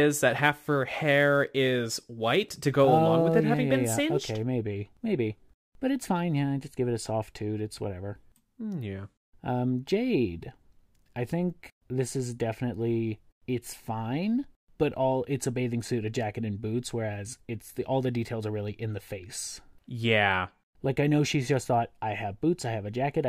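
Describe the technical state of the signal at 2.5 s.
A hiss-like roughness rides on the speech, rising with louder, brighter sounds: sample clock jitter from 0.30 to 4.42 s, a few microseconds of timing wander, its error roughly 35 dB below the signal.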